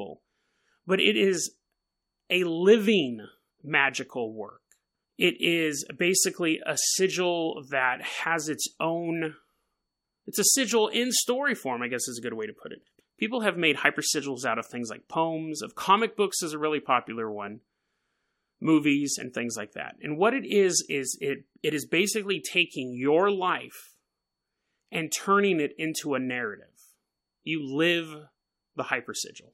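Nothing in this speech recording stands out as a technical fault at any point.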